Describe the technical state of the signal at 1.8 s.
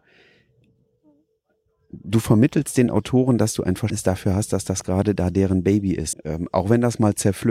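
At 1.8 s the speech signal is intact, with no dropout, distortion, glitch or other audible fault at that point.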